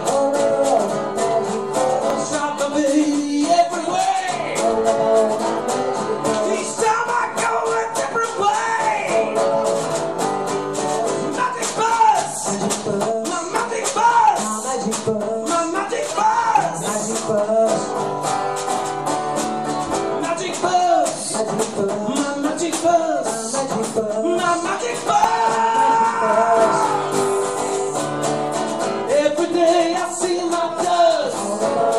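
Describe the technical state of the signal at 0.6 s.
The signal at 0.6 s is intact, with no audible technical fault at that point.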